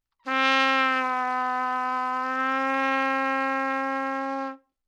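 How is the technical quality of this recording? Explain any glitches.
No glitches or faults can be heard anywhere in the recording.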